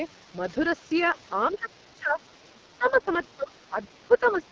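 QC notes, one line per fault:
Throughout: AMR wideband (HD Voice) codec at 6.6 kbit/s, its lowest rate. With so few bits, the vocal tract model and pulse excitation can't follow the speech closely, so it comes out rough and raspy. Nothing is present above about 7.1 kHz.
1.47–1.56 s, 2.84–3.28 s, 4.14–4.52 s: other side's voice leaking through. The likely cause is the far-end loudspeaker audio reaching the talker's microphone and getting past the echo canceller. A faint second voice surfaces in short scraps, about 25 dB below the speech in the first two spots and about 20 dB below at the end.
1.53–4.43 s: speech suppressed in double talk. The likely cause is the echo canceller failing to separate the talker from the loudspeaker echo and turning everything down. The speech dips, by up to about 20 dB, for roughly a second and a half in total.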